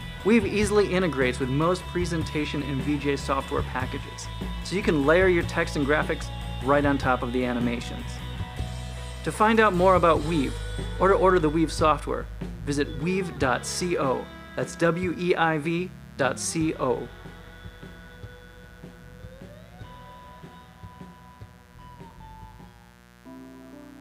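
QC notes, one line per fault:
Throughout: mains buzz. A steady, raspy 60 Hz buzz sits roughly 25 dB below the signal. Switching spikes leak in twice per mains cycle, 120 times a second, and their 60 Hz harmonics extend to several kHz, giving a rasp rather than a hum.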